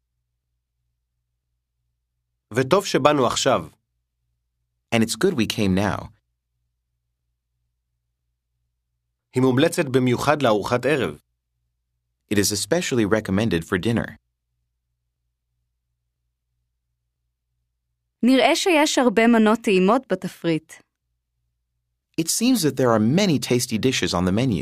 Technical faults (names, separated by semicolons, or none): none